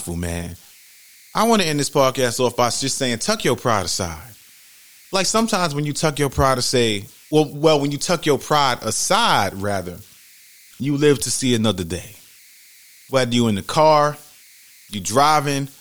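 Throughout the speech, converter idle tones sit about 30 dB below the signal: an undithered delta-sigma converter locks into repeating bit patterns at low levels, producing a whistle around 2 kHz in pauses. A spectrogram shows a thin horizontal line there.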